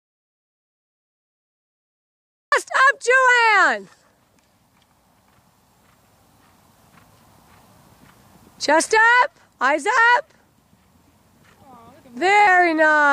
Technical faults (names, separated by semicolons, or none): audio dropout to silence